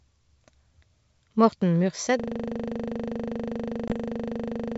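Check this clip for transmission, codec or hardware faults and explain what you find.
Two faults stand out in this wideband speech, whose G.722 coding sounds consistent with the full 64 kbit/s mode: a system hang loop and a short ADPCM packet loss.

From 2.20 s to the end, a system hang loop takes over. The driver stalled while the hardware kept replaying one 40 ms stretch of its ring buffer, dozens of times. The result is a rigid 25 Hz buzz with no variation at all. That exact repetition distinguishes it from a stutter caused by dropouts.

At 3.88 to 3.94 s there is packet loss on the ADPCM call, with about 20 ms, a couple of packets, going missing. The gap is filled with silence, leaving the decoder's predictor and step size out of step with the sender's. You hear a hard-edged hole, then slightly distorted speech that settles quickly. The brief, single gap sets this apart from the endlessly repeating loop.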